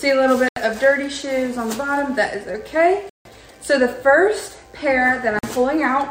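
Three dropouts to silence interrupt the audio: at 0.49 to 0.57 s (78 ms), at 3.09 to 3.25 s (158 ms), and at 5.39 to 5.43 s (45 ms). Each is a clean gap with no fade, after which playback resumes. The pattern is likely a Bluetooth stall, where radio interference delays packets, the receiver's buffer empties, and output halts until the retransmitted data arrives.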